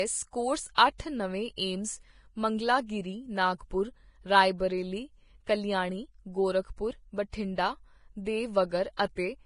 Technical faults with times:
0.00-9.46 Vorbis compression
0.75-0.78 pre-echo
8.97-8.99 pre-echo

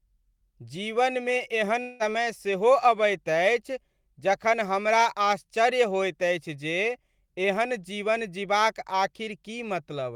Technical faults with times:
1.81-2.02 long network dropout

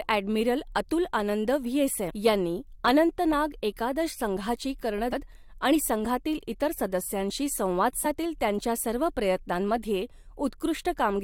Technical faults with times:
2.09-2.11 damaged data in a compressed stream
5.12 damaged data in a compressed stream
8.04 damaged data in a compressed stream

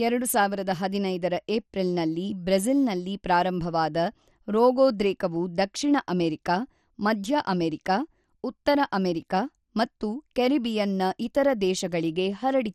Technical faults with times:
0.00-12.74 MP2 compression

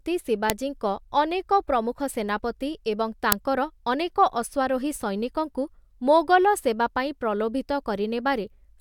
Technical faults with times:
0.50 uninitialised buffer
3.32 uninitialised buffer

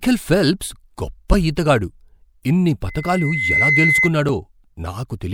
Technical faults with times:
1.33 damaged data in a compressed stream
2.88-4.12 loudspeaker feedback squeal
4.29 damaged data in a compressed stream

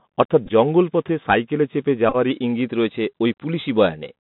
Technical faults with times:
0.00-4.24 Bluetooth CVSD headset codec
0.46-0.51 Bluetooth headset packet repeated
2.09-2.16 Bluetooth headset packet repeated
2.30-4.24 drift correction step

